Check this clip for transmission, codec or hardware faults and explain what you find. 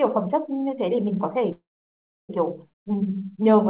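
The clip has three distinct faults: a freeze, a skip ahead and a slow-down. All of it is band-limited with nothing above 4 kHz, which fits G.711 mu-law at 64 kbps on a call path.

From 1.52 to 2.31 s there is a call audio freeze. The last sound is held as a brief fading buzz, then goes silent for about 0.67 s before the sound resumes exactly where it stopped. The likely cause is packets stalling in transit and the jitter buffer running dry, which inserted roughly 0.77 s of filler without losing any audio.

At 2.73 to 2.75 s the audio skips ahead. Around 0.4 s of sound simply vanishes, with only a few milliseconds of filler at the join, so the two sides butt together almost seamlessly. Audio was discarded, in transit or by an overfull jitter buffer, while later packets were already queued.

From 2.82 s to the end there is a jitter buffer slow-down. The sound plays at about 91% speed with unchanged pitch, and sounds are drawn out. 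The buffer was rebuilding its reserve by repeating single pitch periods, adding about 83 ms in total.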